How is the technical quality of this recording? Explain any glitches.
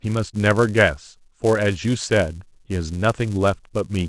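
The recording is compromised by one fault running from start to finish: a filter restarted on every block. The filter loses its memory at each block boundary and begins again from silence, so every block opens with a small transient. Those transients repeat at 188 Hz, which fits a 128-sample block, and are heard as a steady buzz under the speech that grows and fades with its level. A waveform shows evenly spaced spikes, and a spectrogram shows horizontal lines at 188 Hz and its harmonics.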